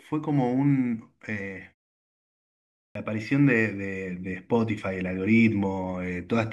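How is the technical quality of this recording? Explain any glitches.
There's one glitch worth flagging, a clipped start after a pause. At 2.91 s, following about 1.25 s of quiet, speech resumes with its first 43 ms missing. The output device seems to drop into a low-power state during silence and takes a moment to wake back up, so the next word kicks in abruptly without its opening sounds.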